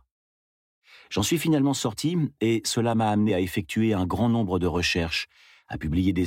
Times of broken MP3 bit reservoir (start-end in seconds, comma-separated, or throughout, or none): none